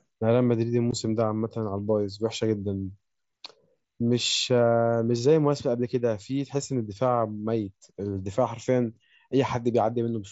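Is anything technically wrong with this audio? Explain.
Yes. At 0.91 s there is an unconcealed Bluetooth headset packet loss. About 15 ms of speech vanishes, which fits two headset packets dropping between headset and phone. Nothing fills the gap, so silence or an idle pattern replaces it. The result is a brief hole with abrupt edges. The mSBC headset link carries the speech up to 8 kHz, with a light grain on louder sounds.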